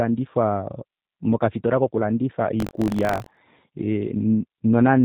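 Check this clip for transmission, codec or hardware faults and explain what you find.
Two faults are audible: G.729 codec damage throughout, and buffer tearing in one stretch.

The whole clip carries plain G.729 codec damage at 8 kbit/s. The speech is rebuilt from a filter model, a pitch predictor and a few pulses per frame. Nothing above 4 kHz survives. The result sounds muffled, rough and slightly synthetic.

Buffer tearing runs from 2.58 to 3.39 s, starting just after "mokafitola kokulandifa". The writer and the reader of the ring buffer have slipped and cross inside each period. A small slice of each buffer replays audio from about 40 ms earlier, with hard joins. This gives a steady 46.9 Hz robotic buzz, which fits a 1024-sample buffer.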